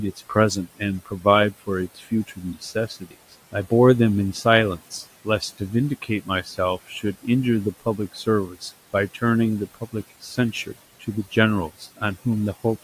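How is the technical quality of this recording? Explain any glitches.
The recording is marred by the noise suppressor clipping parts of the speech. Speech cut by the noise suppressor occurs from 0.16 to 3.71 s, 4.34 to 7.26 s and 7.8 to 12.26 s. The room noise sits about 20 dB below the speech, and the suppressor misjudges quieter speech as that noise and turns it down by about 13 to 18 dB. Together, under two seconds of soft consonants and word endings sound swallowed or faint.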